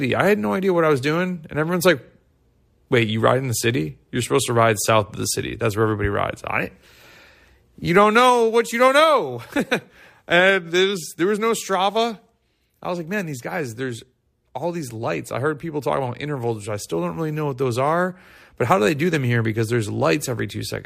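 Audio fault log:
No faults heard anywhere in this speech recording.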